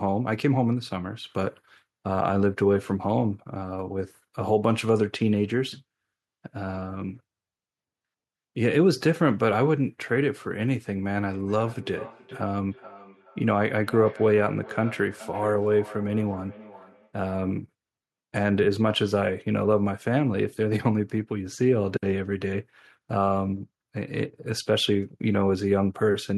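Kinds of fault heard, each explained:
Feedback echo between two devices: from 11.26 to 17.18 s the speech comes back roughly every 0.4 s, peaking about 18 dB down. A second device replays it into a microphone its canceller ignores. Unlike reverb, the repeats are evenly spaced copies, not a smooth tail.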